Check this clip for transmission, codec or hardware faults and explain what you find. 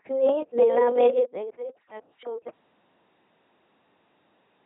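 Two faults are present: LPC-10 vocoder coding across the whole speech clip, and an audio dropout to silence that begins partway through and never recovers.

The LPC-10 vocoder runs from start to finish. At about 2.4 kbit/s, the speech is rebuilt from a small all-pole filter excited by either a pulse train or noise, with each frame forced to be entirely voiced or entirely unvoiced. The result is a heavily damaged, buzzy, mechanical robot voice with no content above 3.8 kHz. Wherever the voicing decision goes wrong, the frame turns into a harsh buzz or a hiss.

The audio dropout to silence starts at 2.49 s and lasts to the end of the clip. The signal stops abruptly and is replaced by silence, with no room tone or noise floor underneath. This points to the input path being lost while recording or encoding carried on writing silence, most likely because of a disconnected device, a broken link or an accidental mute. 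Everything after that point is missing.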